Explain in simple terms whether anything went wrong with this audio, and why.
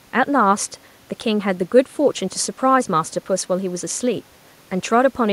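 Nothing went wrong here: the speech comes across without any glitches, dropouts or odd sounds at any point.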